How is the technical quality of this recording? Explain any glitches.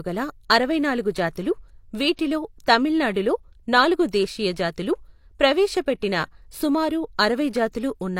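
One glitch is present in this speech recording. At 2.16 to 2.19 s, a short hiss smears ahead of a sharp onset. This is pre-echo: transform-codec quantisation noise spread about 25 ms before the attack.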